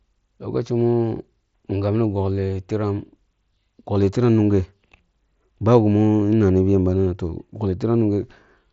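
The speech carries no technical faults, and what can be heard is the ordinary character of a wideband Bluetooth headset link using the mSBC codec, with the audio band reaching up to about 8 kHz and a light graininess on the louder sounds.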